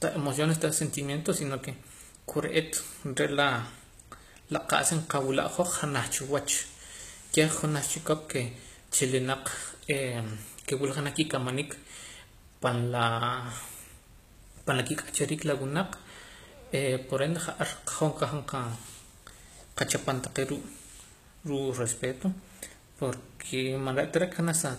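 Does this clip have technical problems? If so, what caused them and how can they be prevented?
Yes. Across the whole speech clip, nothing is heard above 14.9 kHz, and the lossy damage of a far leaner encode remains. This is likely low-bitrate audio saved at a high bitrate, fitting a 20 kbit/s HE-AAC source re-encoded as 256 kbit/s MP3. A genuinely high-bitrate MP3 would not carry these traces, and the larger file restores nothing the first codec removed. To prevent it, always encode from the original uncompressed or highest-quality source rather than from an already compressed copy.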